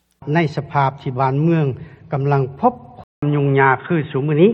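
At 3.04 s the input was likely switched to a poorer device. A 187 ms silence marks the change. Afterwards nothing passes above 3.8 kHz, so the sound turns dull and boxy, its level shifts by roughly 5 dB, and faint new background noise appears.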